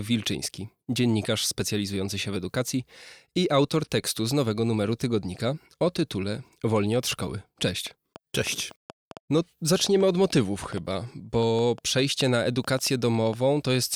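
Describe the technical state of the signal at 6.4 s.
At 6.4 s the speech signal is intact, with no technical fault to be heard at that moment.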